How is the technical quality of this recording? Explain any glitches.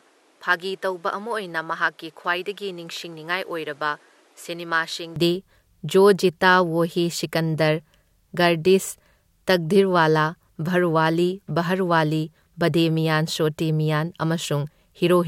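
The recording has one clear glitch: for the first 5.16 s the speech sounds duller and quieter, then opens up abruptly with no gap. That stretch most likely comes from the input switched to a poorer device, a narrower-band microphone whose response stops at 13 kHz, with added background noise roughly 30 dB below the speech and a level about 5 dB lower. On a spectrogram the top band is empty until 5.16 s; the waveform then grows slightly taller.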